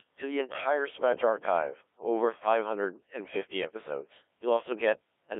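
From start to finish the speech has been through a Codec 2 vocoder. Only pitch, voicing, energy and a coarse spectral envelope survive, rebuilt from sine waves inside a 300 Hz to 3.5 kHz band, so it sounds heavily robotic and buzzy, which fits a rate near 1.3 kbit/s.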